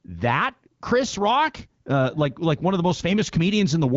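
Nothing stood out on listening to this speech recording.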